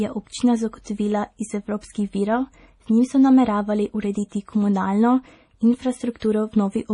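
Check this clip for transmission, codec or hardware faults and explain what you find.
Two kinds of trouble here: heavy codec damage over the whole speech clip, and three spots of pre-echo.

The whole thing sounds watery and swirly, with nothing above 10.6 kHz, so the treble just stops. The likely cause is MP3 compression at a low bitrate, roughly what you'd get around 32 kbps. Short on bits, the encoder chops the top end at a fixed point and drops quieter frequency detail, which flickers on and off between frames. That gives the s sounds a metallic, chirpy edge and softens onsets.

Pre-echo shows up at 0.84 s, right after "je občina" and before "iz evropskih virov"; again from 4.29 to 4.32 s, just after "njim so nameravali"; and from 6.20 to 6.22 s. Each time a brief hiss of 17 to 28 ms creeps in ahead of a sharp attack. The codec spreads its noise across a whole block, so when the hit lands late in a block, noise sized for the loud part leaks into the quiet gap before it, and the attack itself sounds smeared.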